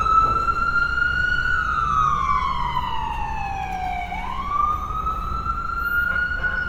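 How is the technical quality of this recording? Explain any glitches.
The technical quality is compromised throughout by Opus compression. The damage is plainly audible from start to finish. The likely cause is an Opus encoder in its music (CELT) mode running short of bits, at a rate that fits about 24 kbps. CELT preserves each band's overall energy but fills starved bands with folded copies of lower ones or with noise. Content in this everyday sound comes out rough and grainy rather than swirly, even though the full bandwidth reaches about 20.1 kHz.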